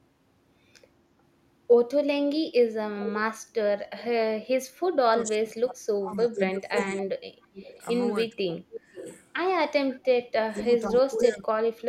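From 5.11 to 7.1 s the speech is suppressed in double talk: level drops by as much as about 30 dB over roughly two seconds. The likely cause is an echo canceller turning the talker down while the far side speaks. The waveform pinches in and the spectrogram's upper bands thin out. Overlapping it, from 6.37 to 7.85 s, an echo leak returns the sound about 509 ms late at about 10 dB below the speech, likely residual loudspeaker pickup. It shows as a fainter, delayed duplicate of the harmonic pattern. Suppression returns from 8.07 to 9.05 s (about 30 dB deep, around 0.7 s affected), with a weak echo at about 20 dB down from 8.74 to 9.2 s. A strong echo, only about 5 dB under the speech, runs from 9.98 to 11.25 s, and the final dip of about 20 dB spans 10.49 to 11.66 s.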